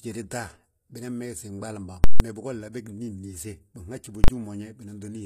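Throughout the speech, the treble is plainly gritty and metallic, with lispy s sounds, likely from HE-AAC compression at a low bitrate around 24 kbps. Upper bands are rebuilt from copied lower ones, so harmonics misalign; a spectrogram shows repeated, blocky treble copies.

At 2.04 to 2.2 s, a 160 ms block of invalid numbers pinned to an extreme value gives loud pops at its edges with nothing between. At 4.24 to 4.28 s the same fault spans 40 ms. Waveforms show flat offset plateaus beyond the speech; spectrograms show broadband edge stripes.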